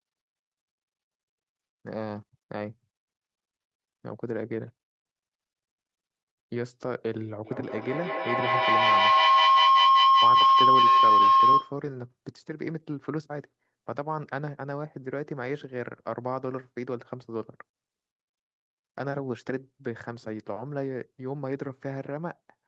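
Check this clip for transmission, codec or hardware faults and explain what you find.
There is one clear fault, a feedback howl. From 7.45 to 11.81 s a shrill tone near 1 kHz swells over the speech, peaking about 12 dB above it, with the loop repeating roughly every fifth of a second. Two devices sharing a room and a call form a microphone-to-loudspeaker loop that gains level on each pass. The repeats build rather than decay and narrow onto the frequency the loop favours. The audio above 8 kHz is missing, as expected from the call path's codec.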